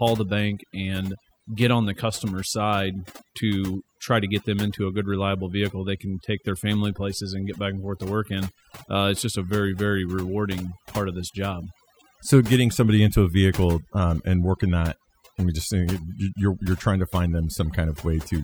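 A speech recording with overdone noise removal running the whole way through: the denoiser's set too hard, so the background drops and breaks up into twinkling specks.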